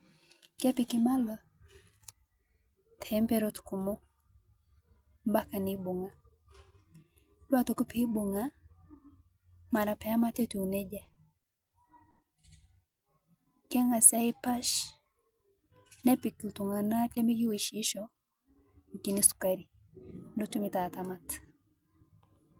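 Between 10.99 and 11.74 s, packets kept arriving late, so the jitter buffer ran dry five times. The receiver bridged each gap by continuing the last sound, 130 ms in all, with the longest gap 50 ms. The speech drags and stutters across this stretch, with about 17% of it filled in rather than received.

A short stall from a late packet follows at 12.10 to 12.21 s. One packet missed its playout time, the buffer emptied, and the receiver stretched the preceding sound by 90 ms before resuming exactly where it stopped. The result is a held syllable with a faint buzz or dip, and nothing is lost.

At 12.89 to 13.03 s there is a call audio freeze. The speech halts and 120 ms of silence is inserted before it picks up from the same point. The likely cause is packets held up in transit, leaving the receiver with nothing to play until they arrived.

From 13.84 to 14.59 s, the jitter buffer slows down to rebuild its reserve. 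It repeated single pitch periods and slices of pauses, adding 75 ms of audio. The speech runs at 91% of normal speed with unchanged pitch, so sounds are drawn out, sometimes with a slight warble.

Between 17.04 and 19.53 s, the jitter buffer speeds up after holding more audio than it targets. It trimmed short runs of pitch periods, removing roughly 150 ms in total. The speech plays at 107% speed at the same pitch and sounds slightly hurried.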